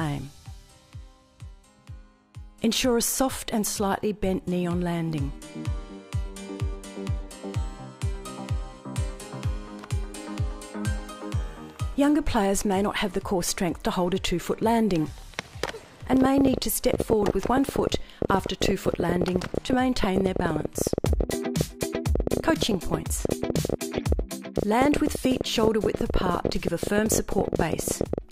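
From 16.13 s to 28.19 s the audio carries a rapid, uneven ticking and popping laid over the sound, continuing straight through any pauses: a train of clicks arriving at about 13.1 per second with irregular spacing, some 150 in all, the loudest standing roughly 20 dB proud of the signal. Because the pulses share much the same shape and persist for twelve seconds, the likely cause is an external source such as interference from nearby equipment or a faulty connection or power supply.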